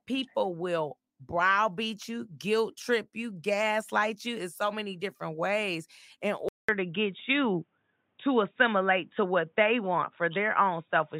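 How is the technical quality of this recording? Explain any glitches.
The recording degrades partway through. From 6.49 s to the end, after a 200 ms silence, the speech turns dull and band-limited, with nothing above 3.8 kHz, a level shift of about 5 dB and faint new background noise. This is likely an input switched to a poorer device.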